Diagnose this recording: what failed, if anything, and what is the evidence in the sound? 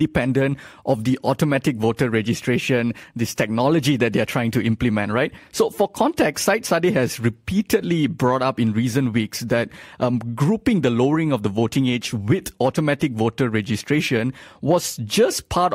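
Nothing in this speech recording points to a failure at any stage of the chain. No event in the sound needs a diagnosis.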